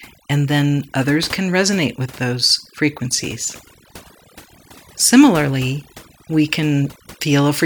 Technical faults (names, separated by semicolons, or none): overdone noise removal